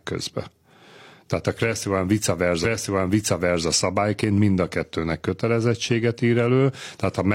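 A stream segment was repeated because the player fetched or queued it twice, so between 2.60 and 3.63 s about 1.02 s of speech plays again, with a blip at the jump back.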